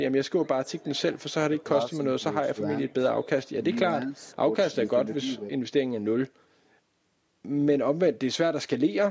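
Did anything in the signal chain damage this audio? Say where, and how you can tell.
No, nothing damaged this audio.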